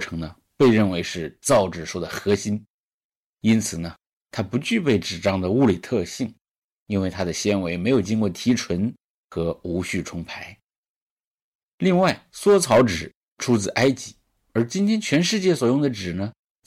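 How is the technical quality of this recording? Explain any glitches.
The main problem is hard clipping throughout the speech. The signal is driven about 8 dB past what the chain can pass, so the loudest peaks get sliced flat. Only a small share of samples, around one percent, hit that ceiling, but each flat top sprays high harmonics, giving a crackly edge on louder syllables.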